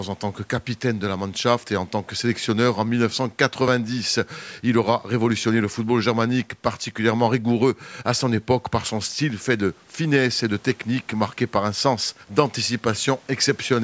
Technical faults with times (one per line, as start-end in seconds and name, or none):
none